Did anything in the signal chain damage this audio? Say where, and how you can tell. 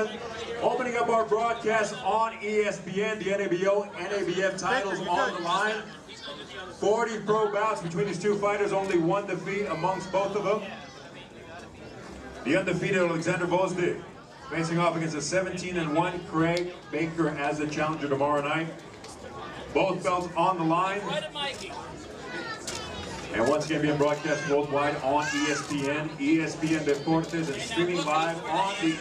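No, nothing along the chain, from capture through to playback, has left an audible mark on this audio.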